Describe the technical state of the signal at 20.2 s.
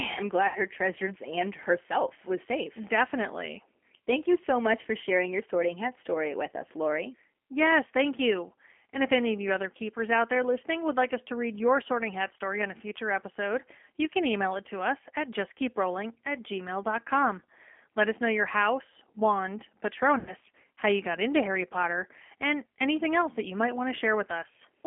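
Between 20.19 and 20.33 s, just after "know your house wand" and before "how you got into", the speech smears into a fading buzzy tone or coloured noise and stays weak as it recovers. This is VoIP packet loss concealed by the speech codec: roughly 80 ms of audio, which fits about four lost packets, went missing. The decoder filled the gap by repeating its last pitch and filter at falling gain.

Underneath, the sound is narrow and slightly rough and synthetic, confined to about 250 Hz to 3.4 kHz. That is the G.729 codec, which rebuilds speech at 8 kbit/s from a vocal tract model and a few pulses per frame.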